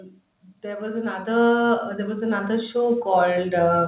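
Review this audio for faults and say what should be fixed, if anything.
From 0.45 s right through to the end there's automatic gain rising. The gain control decided the input was too quiet and kept ramping it up, so the speech and the background noise swell together. It sits over a narrowband call path that stops around 4 kHz. Worth fixing: set a sensible fixed input level, or cap the AGC's maximum gain and slow its attack, so it doesn't chase quiet passages.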